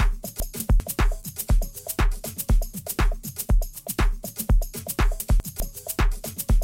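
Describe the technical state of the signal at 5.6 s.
At 5.6 s the signal is coming out of a chunks-out-of-order fault spanning 5.2 to 5.6 s. Two 200 ms blocks play swapped, one block arriving one chunk late, so nothing is missing but the passage sounds jumbled, with three hard joins.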